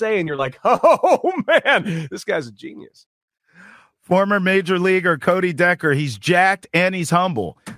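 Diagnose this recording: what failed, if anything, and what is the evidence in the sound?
Nothing in the chain seems to have failed here; the speech runs steadily with no dropouts, glitches, clicks or level jumps anywhere to point at a stage gone wrong.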